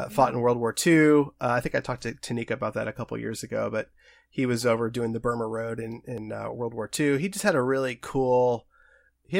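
A dropped buffer at 6.18 s and again at 8.82 s, likely an overrun: the speech jumps forward where roughly 20 ms, then about 10 ms, went uncollected before being overwritten, and the surrounding audio butts together without any gap.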